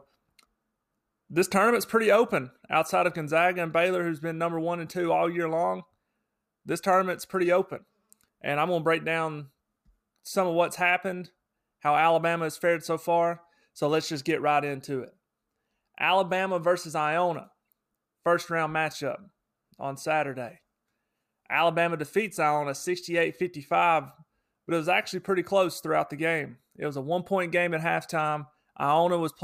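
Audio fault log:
No fault is heard in this speech clip.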